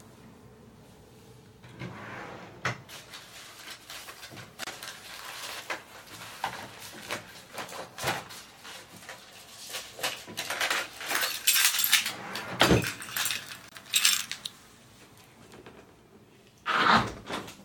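At 4.64 s the sound drops out for about 31 ms, and again at 13.69 s for about 25 ms. Both are gaps at a join of encoded pieces: separately encoded segments were stitched without trimming the encoder's lead-in silence and end padding. Each gap has smeared edges, and then the sound carries on exactly where it left off.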